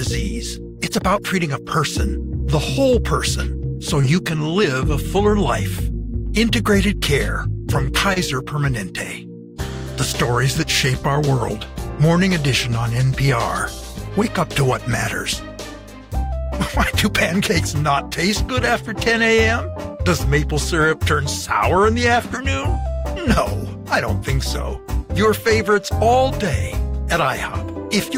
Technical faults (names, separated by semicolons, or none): short concealed packet loss